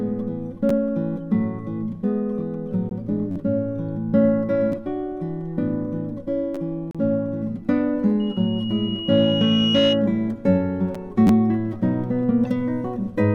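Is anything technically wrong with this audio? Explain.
Yes, three kinds of fault.

Repeated buffer at 0.69, 3.31–3.36, 4.72, 6.55–6.57 and 11.27–11.29 s: late audio made the player replay a chunk of about 10.7 ms, which fits a 512-sample buffer. The result is brief clicky stutters.

Gap between stream segments at 2.89, 6.91–6.95 and 10.95 s: segment timestamps leave holes, filled with hard-edged silence of 17.5, 35.1 and 7.6 ms, at boundaries of 2 s segments.

Loudspeaker feedback squeal from 8.2 to 10.0 s: a microphone-to-speaker loop reinforced 2.9 kHz, which swells over roughly 1.5 s into a squeal about 5 dB above the sound.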